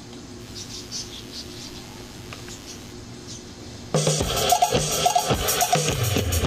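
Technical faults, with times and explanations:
0.37 to 2.95 s, mains buzz: a steady, raspy buzz sits about 25 dB under the sound, from switching spikes twice per 50 Hz cycle whose harmonics climb into the kilohertz range.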